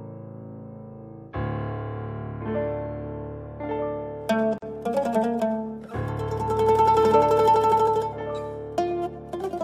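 At 4.58 s there's a gap at a join of encoded pieces: the sound drops out for about 42 ms, to 4.62 s, then picks up right where it left off. The pieces were encoded separately, and the encoder's start delay and end padding stayed in at the join, leaving smeared edges.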